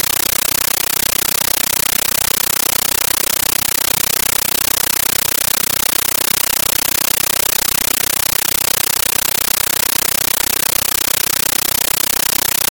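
A speech recording replaced throughout by very loud, chattering static pulsing about 31 times a second, each 13.3 ms noise burst followed by silence: a compressed stream played as audio, likely an undecoded AC-3 bitstream taken for ordinary samples.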